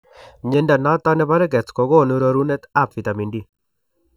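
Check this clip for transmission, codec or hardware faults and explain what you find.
One fault is present, a channel delay with comb filtering. From 0.54 s to the end, one channel arrives under a millisecond late and mixes with the other, cancelling at evenly spaced frequencies from around 700 Hz, so the speech turns hollow and phasey.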